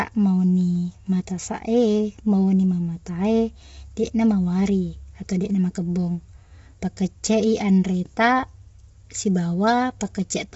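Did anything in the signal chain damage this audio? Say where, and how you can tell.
Yes, at the codec stage, throughout: the speech sounds rough and grainy, with noise filling the gaps between harmonics and nothing above 7.8 kHz. The likely cause is low-delay AAC compression, whose short frames smear pitch harmonics, at a rate that fits about 24 kbps. A plain low-pass filter would not add that graininess.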